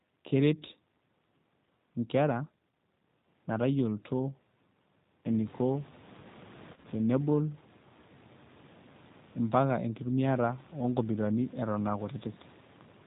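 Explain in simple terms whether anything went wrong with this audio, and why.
Two things went wrong, both from the phone-call style link the speech travelled over.

The whole clip has passed through the G.729 codec, a low-rate internet-calling codec that doesn't send the sound itself. It sends a compact description of the voice, and the receiving end rebuilds the speech from it. The rebuilt voice is clearly rough and slightly artificial, and it sounds muffled because nothing above 4 kHz gets through. The damage is plainly audible from start to finish.

Around 6.74 to 6.86 s there is VoIP packet loss concealed by the speech codec. Over about 100 ms, roughly 70 ms of the audio never arrived, in short gaps with the longest lasting 40 ms. The decoder filled the holes by stretching out the last sound it had, which is heard as a brief buzzy or noisy, smeared patch. The voice stays weak or distorted just after the gaps while the decoder recovers.

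The background room noise grows louder from around 5 s. That belongs to the room itself and is not a fault.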